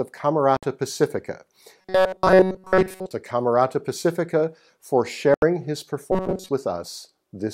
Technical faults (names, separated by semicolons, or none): Bluetooth dropout; robotic sound from repeated short buffers